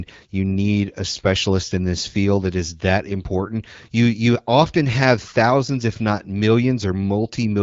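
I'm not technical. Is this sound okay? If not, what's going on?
Yes, it's fine: this is speech coming through an HD Voice mobile phone connection, and there's nothing wrong here that needs sorting out.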